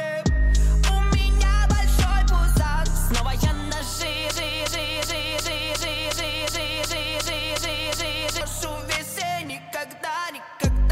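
From 4.31 s to 8.41 s the audio falls into a broken-record loop: a 0.36 s fragment repeats exactly, back to back, 11 times, likely from a stalled player or stream resending its last buffer. Unlike echo, the repeats don't decay, and the original audio is lost.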